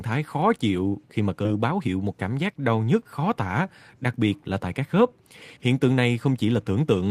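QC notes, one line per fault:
1.45–1.47 s, skip ahead: right after "chịu khi mà cơ" the speech jumps forward, with roughly 0.7 s of audio gone and no gap or filler at the join. The receiver discarded that stretch while later audio was already queued, so the two sides butt together and a syllable or more vanishes. On the waveform the envelope changes abruptly with no silence. On the spectrogram the harmonics and formants break off and restart at a different position.
1.55–2.69 s, jitter buffer speed-up: just before "nhức khó tả đặc" the speech runs about 111% of normal speed at unchanged pitch and sounds hurried. The buffer held more than its target, so it repeatedly cut out short pitch-period-length pieces, around 150 ms in total, to bring latency back down. The waveform shows compressed syllable spacing. On the spectrogram, harmonic spacing stays steady but syllables and formant transitions are squeezed closer together in time.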